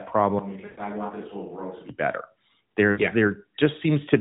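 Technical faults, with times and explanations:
0.39–1.89 s, switch to a distant microphone: The sound abruptly turns roomy and hollow, thinner in the bass and about 10 dB quieter, with faint room noise rising behind it, then snaps back. The likely cause is the close microphone dropping out, leaving a farther pickup carrying the signal.
0.66–0.81 s and 2.92–3.01 s, lost AMR speech frames: The sound smears into a drawn-out, fading tone for about 120 ms, then about 60 ms, returning weak and rough. The narrowband decoder is replaying its last good pitch and vocal-tract settings with falling gain, which fits runs of six and three 20 ms frames lost.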